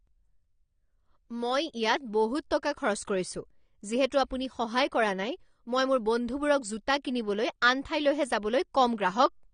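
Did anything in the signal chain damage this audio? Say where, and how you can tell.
Yes. From start to finish the speech sounds dull and smeared, with a fizzy, warbling edge on sibilants and sustained sounds, and nothing survives above about 9.7 kHz. That points to the codec stage, most likely AAC compression (AAC-LC) at a low rate, consistent with around 32 kbps. Starved of bits, the encoder lowered its cut-off and quantised the remaining bands coarsely, which leaves spectral holes that shift from frame to frame and produce that unstable texture.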